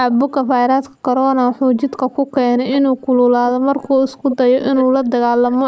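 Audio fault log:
0.11–0.16 s, 2.72–2.79 s, 4.30–4.36 s and 4.61–4.84 s, echo leak: brief scraps of the speech return late, trailing the original by 428 ms in the first and 348 ms in the rest. They are faint at first and grow to only about 10 dB under the speech in the last and longest. A far-end echo canceller likely let loudspeaker pickup through. The spectrogram shows faded repeats of earlier harmonic patterns, and the waveform shows small lagging bursts.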